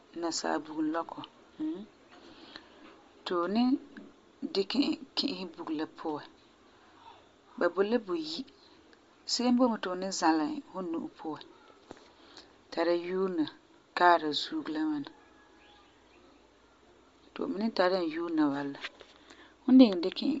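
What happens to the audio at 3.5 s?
At 3.5 s the speech carries the plainly audible damage of Bluetooth LC3 compression, present through the whole clip rather than only at that moment. Nothing is heard above about 7.7 kHz, and the top of the remaining band has a breathy, grainy texture. The transform codec discards much of the upper spectrum and fills the gaps with shaped noise, which likely points to LC3 at a low bitrate around 32 kbps with 10 ms frames. A plain low-pass filter would instead leave a clean, dull top end without that hissy fill.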